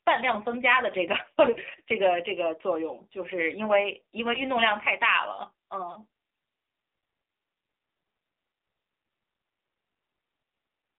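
A speech recording passed through the AMR narrowband mobile codec, so the whole signal is confined to a telephone band of roughly 300 Hz to 3.7 kHz and synthesised from a compact vocal-tract model. The coding damage is plainly audible, giving the speech a thin, synthetic edge that fits a low 7.4 kbps mode. Lost AMR speech frames then caused the decoder to fill gaps by repeating its last good pitch and vocal-tract settings at reduced gain. This produces short dips or warbles at 1.54 to 1.59 s and 4.34 to 4.40 s, each consistent with a single missing frame of about 20 ms. A longer smear at 5.92 to 5.98 s points to two consecutive frames, about 40 ms, being concealed.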